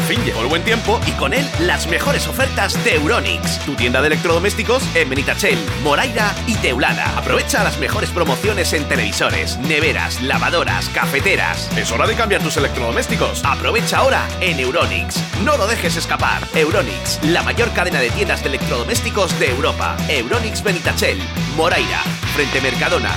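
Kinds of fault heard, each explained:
Loud pop: three single sharp pops land at 9.34, 16.43 and 22.53 s, jumping about 10 dB above the sound (the last nearer 15 dB) while it carries on underneath, likely a brief voltage pulse from a plug, switch or static.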